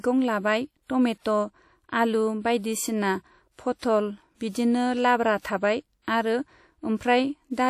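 Speech, likely passed through WMA compression at a low bitrate, consistent with about 48 kbps, so the transform coder smears quantisation noise over long blocks and discards weak spectral detail. Throughout, the voice rings and sounds washy, with a hiss that swells and fades alongside it.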